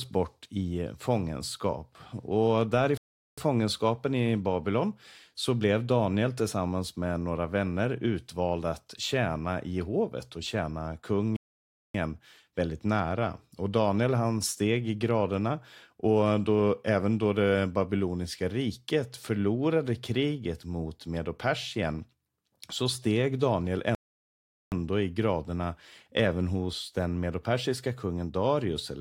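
Playback halts three times in a rebuffering stall, at 2.97 s for 0.40 s, 11.36 s for 0.58 s, and 23.95 s for 0.77 s. The player ran dry on downloaded audio and waited. Each gap is plain silence, then the sound picks up exactly where it left off, with nothing skipped, just time added.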